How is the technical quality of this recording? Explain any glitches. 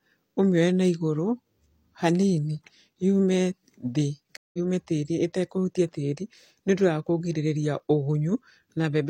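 The recording has one glitch, a stream reconnect. From 4.37 to 4.58 s the speech cuts to 165 ms of silence, then resumes about a fifth of a second further on, so a short piece is skipped. The connection dropped, the player reconnected and started a fresh decoder mid-stream at the live point.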